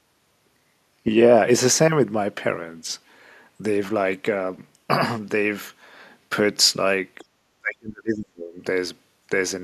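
From 7.6 s to 8.61 s the speech is suppressed in double talk: for about a second the level sinks, at its deepest by something like 35 dB, before recovering. The likely cause is an echo canceller facing simultaneous talk from both ends; unable to separate the near-end talker from loudspeaker echo, it attenuated everything it received, taking the wanted speech down along with the echo.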